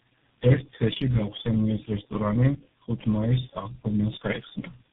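From start to finish, the speech passes through tandem speech coding: the sound points to about four low-rate speech codecs in a row, likely an AMR-type coder, two GSM full-rate stages and a G.723.1-style coder, joined by G.711 links. Each coder re-encodes the previous one's already damaged output, so errors pile up. The result is rough, muffled and warbly, with nothing above 3.7 kHz.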